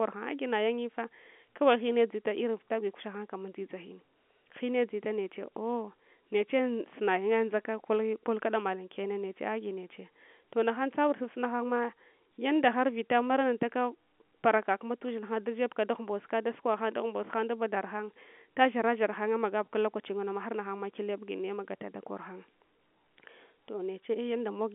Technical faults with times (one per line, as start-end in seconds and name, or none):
none